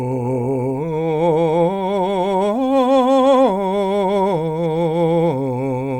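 No technical faults are audible.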